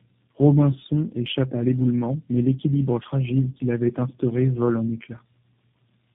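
From start to finish the speech carries tandem speech coding: it passed through three low-bitrate speech coders in series, likely ending in one like G.729A, each re-encoding the previous coder's already degraded output. Nothing reaches above 3.8 kHz, so it sounds muffled, but what sets it apart from a single narrowband codec is the stacked damage: a coarse, buzzy roughness and a warbly, watery smear that compound beyond what any one coder would leave.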